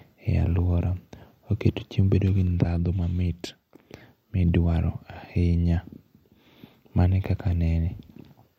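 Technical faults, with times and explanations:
Nothing wrong turns up in this bit of speech; there's simply no technical fault to point to anywhere in it.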